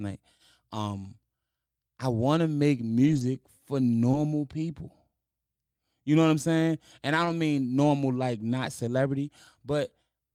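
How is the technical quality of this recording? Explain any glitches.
The recording has short packet-loss repairs at several points, typical of a VoIP call carried over a lossy network.

Lost packets rebuilt from error correction occur at 0.75–0.77 s, 2.21–2.23 s, 3.03–3.21 s, 4.13–4.15 s and 7.25–7.31 s, the last just before "mean normal like not". Each time, the following packet carried a low-bitrate backup copy that the decoder played instead, so there is no dropout. Those stretches sound briefly rougher and noisier. Most last 20 ms, a single packet's worth. The 100 ms stretch at 3.03 s points to about five separate losses, and the 40 ms one at 7.25 s to about two.

Short concealed packet loss occurs at 4.11–4.15 s, where roughly 20 ms of audio arrived too late to decode. The receiver extended the preceding sound for about 16 ms, then crossfaded back into real audio, with the error-correction copy supplying the tail at 4.13 s. 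It registers as a brief smear or wobble rather than a gap.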